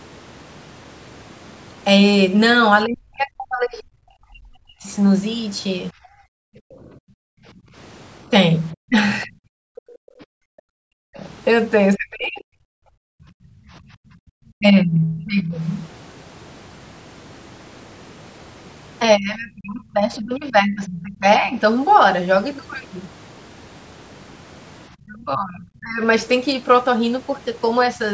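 From 2.86 to 15.55 s the speech keeps ducking, by about 40 dB at worst and roughly four seconds in total. That's speech suppressed in double talk, likely the echo canceller clamping down while both ends talked at once. The same thing returns more gently, by about 25 dB, at 19.17 to 21.57 s and 25.06 to 27.98 s. Between 6.27 and 14.29 s the room tone also drops out, by about 40 dB, for around four seconds in total: background gated by the echo canceller while the loudspeaker was playing. At 9.22 to 9.26 s a faint scrap slips in, some 30 dB under the talker, likely the other side's voice leaking through from the loudspeaker.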